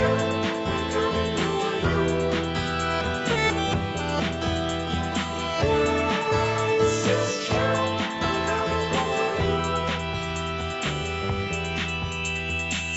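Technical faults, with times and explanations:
The signal carries the ordinary marks of a call chain, with the lowest bass trimmed by the microphone's high-pass filter and nothing above 8 kHz, a top end that fits a wideband Opus call path.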